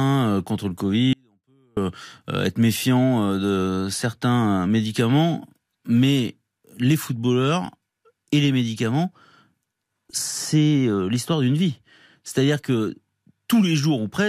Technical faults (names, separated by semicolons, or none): audio dropout to a faint residue